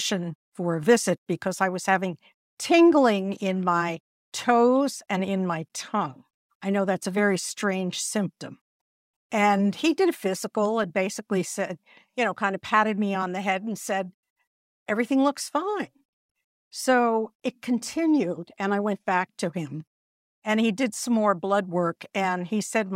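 No technical faults can be heard anywhere in this speech recording. There is nothing in the audio that needs marking at any point in time.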